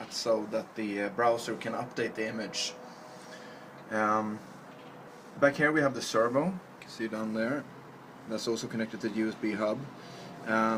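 At 5.07 s there is a skip ahead. About a second of audio is missing. It was dropped, either in transit or by the jitter buffer when it overflowed. Later audio was already queued, so playback jumps straight to it. Nothing fills the hole. The two sides of the cut are joined almost directly. The result is an abrupt forward jump in the sound with no pause.

From 5.17 s to 9.33 s comes a jitter buffer speed-up. The buffer was holding more audio than its target. To bring the delay down, the receiver trimmed many short pieces, each one or a few pitch periods long. Roughly 0.4 s was removed in total. The audio runs at 109% speed with its pitch unchanged. Over this stretch it sounds hurried.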